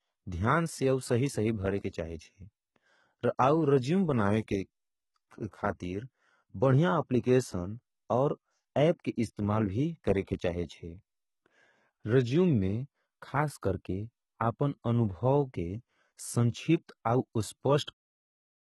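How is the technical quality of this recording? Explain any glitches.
Technical quality is poor. The whole recording carries heavy codec damage, and two short pre-echo artefacts occur at sharp onsets.

Throughout the clip the speech shows the signature of low-bitrate HE-AAC compression, likely HE-AAC v2. Nothing is present above about 11.8 kHz, and the upper range has a synthetic, metallic quality. This happens because the codec transmits only the lower spectrum and regenerates the treble by copying lower bands upward under a coarse envelope. The harmonics in that rebuilt region do not line up with the real ones, so sibilants come out gritty or lispy. The damage is consistent with a very low bitrate in the region of 16 kbps.

Pre-echo appears twice. The first is at 1.90 to 1.93 s, a spread of about 36 ms, right after "सही सही भरें के" and just before "चाहे जेए". The second is at 17.83 to 17.88 s, spread over about 43 ms. 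In each case a short hiss leads into the attack, and the onset sounds softened. The cause is the transform coder distributing quantisation noise across its whole block: when a sharp attack lands late in the block, noise sized for the loud part also spills into the quiet gap before it. The second instance sits just ahead of the smooth fade-out that closes the clip from about 17.95 s.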